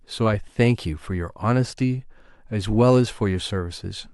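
Speech, with no technical faults audible anywhere in the recording.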